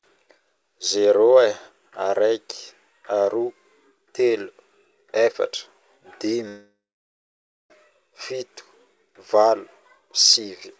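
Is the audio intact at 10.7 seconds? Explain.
Yes, at 10.7 seconds the speech is intact, with no dropout, glitch or distortion, only the band limit of the call codec, which leaves nothing above 8 kHz.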